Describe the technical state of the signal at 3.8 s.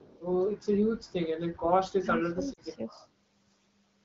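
At 3.8 s the speech is intact, carried cleanly through the AMR wideband (HD Voice) coding with no dropout, glitch or added distortion at that point.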